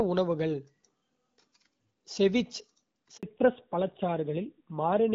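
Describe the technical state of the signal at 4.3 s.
At 4.3 s the call is in a fallback to narrowband, which runs from 3.23 s to the end. Nothing above 4 kHz survives, so the sound is duller and rougher than the wideband audio before it, which fits a switch to a low-rate narrowband speech codec.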